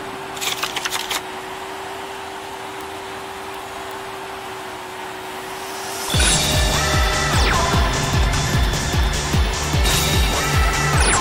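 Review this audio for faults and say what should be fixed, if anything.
Sharp ticks recur at a steady rate of about one every 0.4 s, from 0.23 s to 10.91 s, about 30 in all. These are word clock ticks. The receiving device runs on its own clock, drifting from the sender's by around 50 ppm, so at each slip one sample is dropped or repeated. Lock the receiver to the source's word clock, or use a sample-rate converter at the input.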